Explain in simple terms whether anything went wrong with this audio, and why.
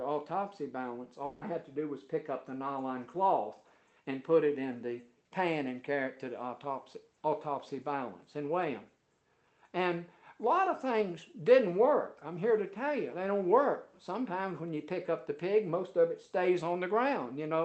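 Between 1.25 and 1.43 s there is a long network dropout. For about 0.16 s no real audio arrives. The receiver fills the gap with a fading buzz built from the last sound. The original audio there is gone. A brief network interruption is the likely cause.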